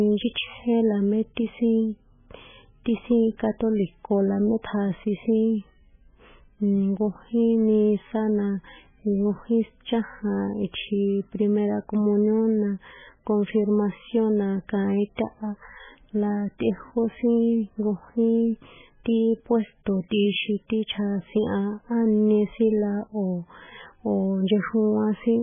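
From start to finish the speech has a hard ceiling at 3.5 kHz, with nothing at all above it, and the upper content that does survive has that watery, swirling quality, sibilants turning into metallic chirps and consonant attacks smeared. That's likely heavy MP3 compression. The damage points to a very low bitrate, something like 9 kbps. The encoder, starved of bits, has chopped off the treble at a fixed point and is dropping weaker frequency lines in and out between frames.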